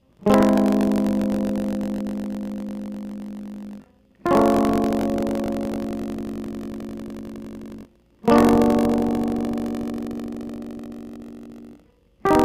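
Throughout the music, buffer tearing produces a rattling 46.9 Hz buzz, which fits a 1024-sample buffer. Writer and reader have slipped, so a small slice of each buffer replays audio about 40 ms old between hard joins. Unlike mains hum, it follows the signal.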